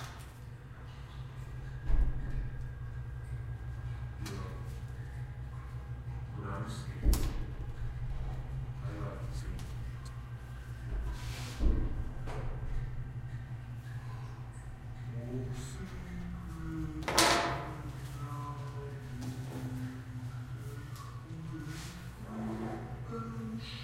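Listening to these everyday sounds, nothing stood out as a technical problem at any point.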